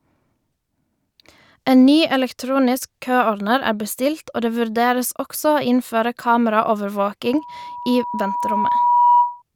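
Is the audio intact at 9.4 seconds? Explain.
No. Loudspeaker feedback squeal runs from 7.25 to 9.42 s, so 9.4 s falls at its very end. The microphone is picking up its own loudspeaker, and around 969 Hz the loop gain passes one, so that frequency keeps reinforcing itself. It is heard as a single tone that swells over about two seconds into a sustained squeal, sitting roughly 5 dB above the speech until it stops just after 9.4 s.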